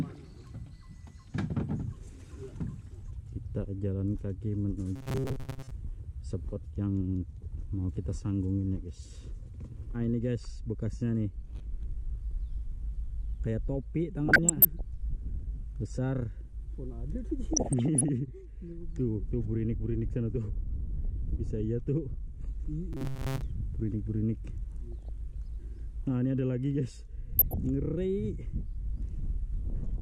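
Two faults recur through the audio. From 4.96 to 5.72 s and again from 22.93 to 23.42 s, the sound turns into a rigid, metallic buzz pitched at 134 Hz that only loosely tracks the underlying audio. This is likely robotic sound from repeated short buffers: a fragment of about 7.5 ms is replayed over and over while most of the real material in those spans is skipped. On a spectrogram this shows as evenly spaced horizontal harmonic lines at multiples of 134 Hz. The waveform shows a short cycle copied end to end. DAB burbling appears at 14.29–14.81 s, 17.53–18.09 s, 24.92–25.09 s and 27.39–27.57 s. Weak reception lets bit errors slip past error correction into the MP2 data, so corrupted samples put short blips of noise in single sub-bands and corrupted scale factors make sub-bands jump in level for up to a frame. The spectrogram shows scattered rectangular blocks of energy confined to narrow bands, each lasting up to one frame. 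The waveform shows small bursts of level that sit apart from the surrounding envelope.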